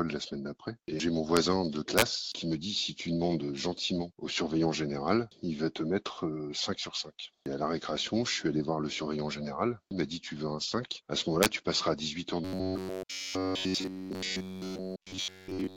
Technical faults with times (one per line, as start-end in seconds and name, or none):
1.37 integer overflow
1.98-2.02 integer overflow
11.43-11.46 integer overflow
12.45-15.76 robotic sound from repeated short buffers